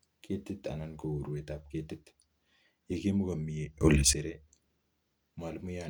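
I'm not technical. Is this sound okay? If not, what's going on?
No, not quite. From about 3.81 to 4.13 seconds there's a sudden gain jump: the speech and the background noise leap up to much louder together, then drop back. That's likely a volume setting switched instantly instead of being eased in gradually.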